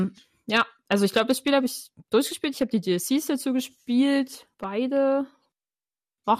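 A brief burbling breaks into the speech at 2.35 s. This is DAB burbling: weak reception let a small trickle of bit errors slip past error correction, corrupting the MP2 audio data.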